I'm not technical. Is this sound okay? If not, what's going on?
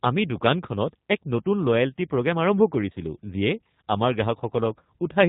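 No. G.729 codec compression runs throughout: the phone-call codec rebuilds speech from a rough model, cutting everything above 4 kHz, so it sounds muffled, rough and slightly robotic.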